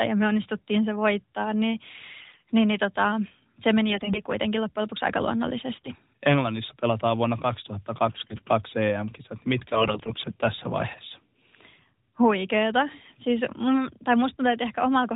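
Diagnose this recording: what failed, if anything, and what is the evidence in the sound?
The stage is the network: AMR bit errors from a weak radio link, in five bursts at 2.20–2.52 s, 3.90–4.21 s, 5.76–5.89 s, 8.08–8.49 s and 9.70–10.32 s. Pitch and loudness hold, but the sound turns hoarse, scratchy and gargly. The first burst is worst, with roughly 15% of bits wrong. Corrupted low-priority bits misplace excitation pulses and skew gain and spectral parameters. On a spectrogram, harmonics below the 4 kHz codec ceiling smear into ragged noise, while the waveform envelope barely changes.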